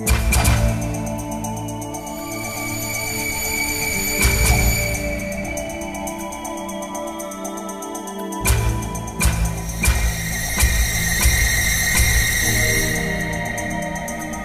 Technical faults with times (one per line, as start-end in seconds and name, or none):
none